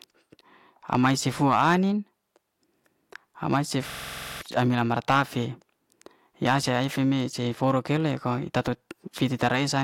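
A speech clip in which, from 3.90 to 4.41 s, the sound suddenly locks into a rapid, rattling stutter: one fragment about 46 ms long repeats exactly, back to back, at about 21.5 times per second. This is a system hang loop. The computer or audio driver briefly stalled while the output hardware kept replaying the same stretch of its ring buffer. The 46 ms loop length fits a 2048-sample buffer. About half a second of real audio is lost before playback recovers.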